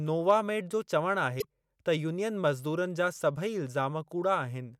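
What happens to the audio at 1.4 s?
Right after "नोवामेड जो चवणु", from 1.38 to 1.45 s, there is damaged data in the compressed stream. The decoder misreads the corrupted frames, loses sync and hunts for the next valid frame header. The result is a brief chirp, squawk, click or short hole in the speech.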